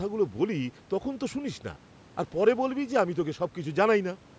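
No technical faults can be heard in this speech.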